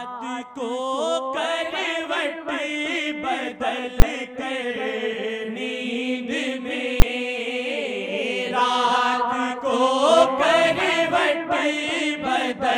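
Two sharp bangs cut through the audio, at 4.00 to 4.02 s and 7.00 to 7.02 s. Each is invalid numbers at full scale. A calculation produced infinite or invalid values, and the output was pinned at maximum level for a 20 ms block. That block is so short that each event is heard as one loud bang.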